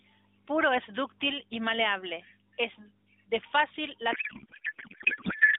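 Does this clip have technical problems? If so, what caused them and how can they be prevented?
Yes. From 4.12 s, just after "maleable es de fácil", to the end of the clip at 5.59 s, the speech turns into garbled noise and warble that barely follows it. This is a codec payload misread. The AMR frames arrive packed octet-aligned but are unpacked as bandwidth-efficient, so every field sits in the wrong bits and the decoder builds nonsense from frames that look valid. The narrowband AMR before this point runs at 12.2 kbps and is limited to about 150 Hz to 3.7 kHz, with only light codec damage. To prevent it, negotiate the AMR payload format explicitly with the octet-align parameter in SDP so both ends agree.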